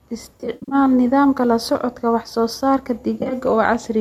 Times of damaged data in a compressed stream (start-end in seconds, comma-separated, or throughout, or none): none